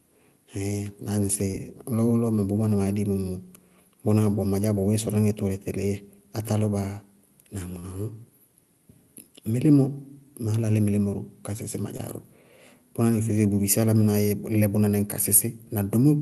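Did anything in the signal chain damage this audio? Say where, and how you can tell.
Yes. Short concealed packet loss, a network-stage fault, at 1.51, 2.35, 7.79 and 11.97 s (the last just after "ka sísí ma"). About 20 ms went missing each time, 40 ms at 7.79 s. The receiver bridged each gap by extending the preceding sound, so each spot comes through as a brief smear or wobble.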